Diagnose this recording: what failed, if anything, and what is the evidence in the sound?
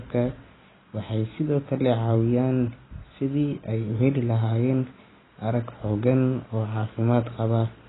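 The codec stage failed, and it does so through the whole speech clip. Nothing comes through above 3.9 kHz, so everything sounds dull, and the sibilants and sustained sounds are smeared with a fizzy, warbly texture. That's heavy AAC compression, likely AAC-LC squeezed to a very low rate, something like 16 kbps. At that rate the encoder lowers its cut-off and quantises the remaining frequency lines so coarsely that the spectrum breaks up.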